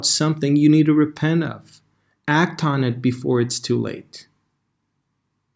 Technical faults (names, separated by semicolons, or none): none